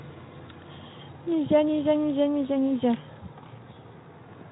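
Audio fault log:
No faults detected anywhere in this speech recording.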